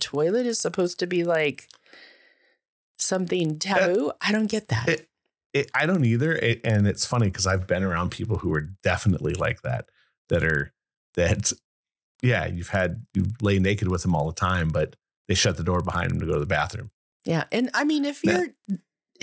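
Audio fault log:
Throughout: resampler restarted on every block. The sound carries a steady tick repeating every 50 ms, a 20 Hz buzz that rides on the speech and drops away in pauses. Each block was converted in isolation, so its edges lacked real neighbouring samples and came out slightly wrong, which points to a 44.1 kHz to 16 kHz conversion done piecewise. On a waveform, small discontinuities sit at regular 50 ms spacing; a spectrogram shows thin vertical lines at the same spacing wherever signal is present.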